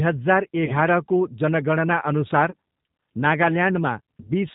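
From start to finish the speech carries plainly audible G.729 codec damage. The sound fits an 8 kbit/s coder that rebuilds the voice from a pitch model and sparse pulses, so it is rough and slightly synthetic. A spectrogram shows a hard ceiling with nothing above 4 kHz.

Three dropouts are covered by VoIP packet loss concealed by the speech codec. They fall at 0.65 to 0.73 s, 2.51 to 2.55 s and 4.21 to 4.31 s. The decoder stretches its last frame into a fading buzzy tone or coloured noise, which a waveform shows as a shrinking, repetitive stretch. The gaps are about 40 ms, 20 ms and 40 ms, which fits two, one and two lost packets, and a weakened tail lingers briefly afterwards.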